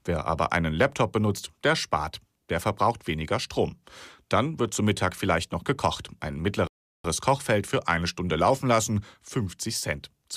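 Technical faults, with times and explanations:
6.67 to 7.04 s, rebuffering stall: the speech halts for 0.37 s of silence while the player waits for more downloaded audio, then carries on from the exact point it stopped, adding time without losing any. The waveform shows a flat gap and the spectrogram a blank vertical band.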